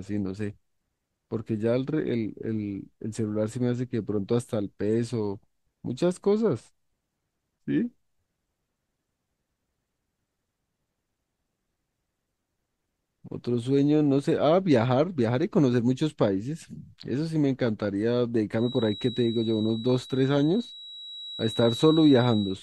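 From 18.52 s to the end of the clip, a feedback whistle sits behind the speech: a thin, steady tone at 3.9 kHz, around 15 dB below the voice, swelling and fading slowly in level. The likely cause is a loudspeaker-to-microphone loop held right at the edge of feedback, so one frequency keeps ringing without building up. On a spectrogram it shows as a narrow horizontal line at 3.9 kHz; on the waveform it adds only a low-level fuzz between syllables.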